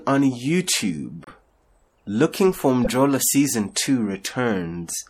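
A short speech recording carries plainly audible compression damage throughout. It sounds watery, with metallic s sounds, likely from MP3 compression at a low bitrate near 64 kbps. Two runs of corrupt frames were also decoded and played as sound. From 1.24 to 1.31 s a faint glitch spans a few frames. From 2.84 to 2.88 s a much louder glitch follows. Misread frame data put energy at the wrong frequencies there.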